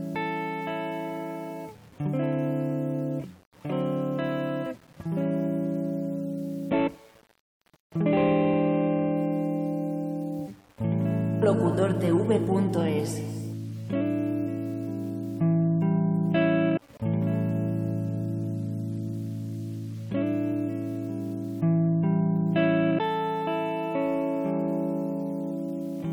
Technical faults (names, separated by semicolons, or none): low bit depth without dither